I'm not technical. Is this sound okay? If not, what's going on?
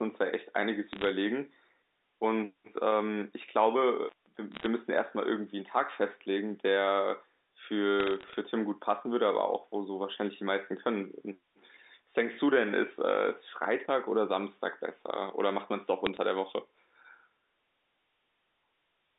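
No. This is speech over a telephone line, and it has two problems.

Bit errors on a digital phone line cause short bursts of sharp ticks and crackle at 0.93 to 1.09, 4.52 to 4.66, 8.00 to 8.35 and 16.06 to 16.17 seconds. A small fraction of the line's digital data gets flipped, and each flip spoils a single tiny piece of the sound. The speech carries on underneath, which separates this from a dropout.

An intermittent contact makes the sound cut out from 4.07 to 4.27 seconds, for about a sixth of a second. A loose plug or cable briefly breaks the connection, so there is crackle at each edge and only faint hiss in between. Here the speech is actually missing, not just ticked over.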